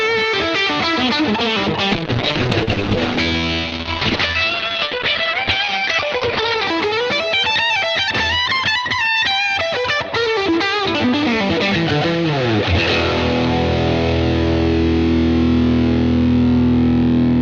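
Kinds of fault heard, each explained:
call bitrate drop: The link's bandwidth estimate fell, so the encoder had to spend far fewer bits. From 1.95 to 6.73 s the sound turns coarse and muffled, with nothing above 6 kHz. That fits a fall from about 40 to 8 kbps.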